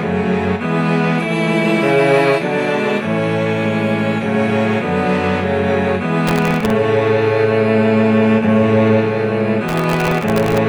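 From 6.27 to 6.70 s, and again from 9.68 to 10.58 s, processor overload crackle tears through the sound. Dozens of very short buffers, under a millisecond each, miss their deadlines in a row. Each one replays stale audio with hard edges, producing gritty crackle. On a spectrogram this shows as dense vertical broadband streaks across both spans. The waveform shows repeated tiny chunks and abrupt step discontinuities.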